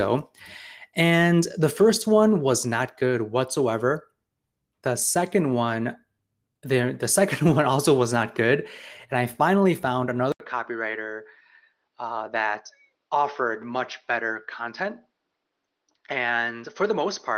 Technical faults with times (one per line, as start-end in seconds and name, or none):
10.32-17.38 input switched to a poorer device